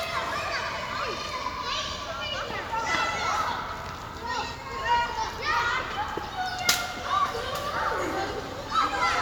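No technical faults can be heard anywhere in this recording of sounds.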